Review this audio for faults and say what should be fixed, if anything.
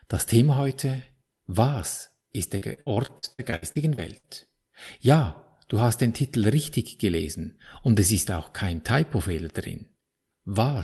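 Repeated packet loss (robotic sound) runs from 2.57 to 4.25 s. About a dozen short holes, the longest 60 ms, are filled by stretching earlier sound, which turns the speech choppy, with pieces missing. Unlike one isolated dropout, the gaps keep recurring. A larger jitter buffer, in-band FEC on the Opus stream and a steadier network link would stop these repeated losses.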